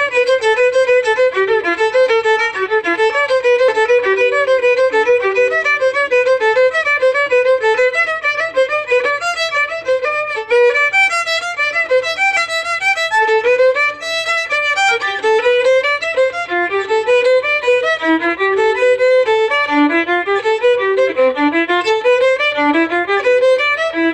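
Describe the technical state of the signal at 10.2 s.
At 10.2 s the signal is intact, with no audible fault at that moment.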